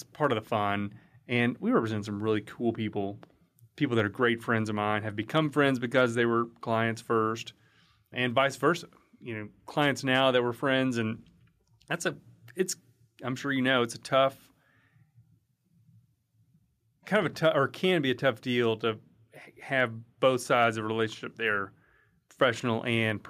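No technical faults can be heard anywhere in the recording.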